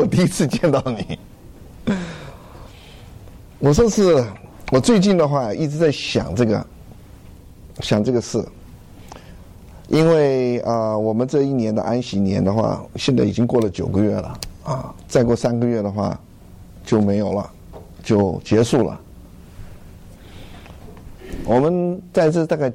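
Throughout the clip there is a block size mismatch (truncated): one stage hands over longer blocks than the next stage takes in, so the tail of every block is discarded. The result is a steady buzz at 43.1 Hz, which fits 1024-sample blocks, while the playback speed stays unchanged. On a waveform, discontinuities recur every 23 ms or so. A spectrogram shows vertical striations at that spacing, with harmonics of 43.1 Hz.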